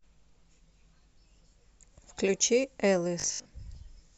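From 3.20 to 3.50 s the speech collapses into a rigid, metallic buzz pitched at 50 Hz, roughly tracking the words: robotic sound from repeated short buffers. Audio likely arrived too slowly, so a 20 ms slice was looped over most of that stretch.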